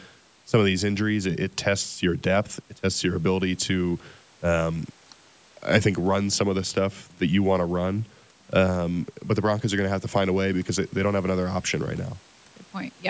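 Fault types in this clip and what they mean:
No faults can be heard in this speech clip. It has passed through a call's microphone processing, so the audio holds nothing above 8 kHz.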